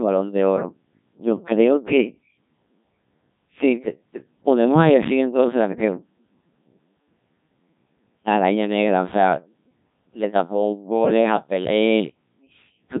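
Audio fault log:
throughout, Codec 2 vocoder: the decoder resynthesises speech from sine waves using only pitch, voicing and envelope data, fitting roughly 1.3 kbit/s, so it sounds heavily robotic and buzzy, with nothing above 3.8 kHz.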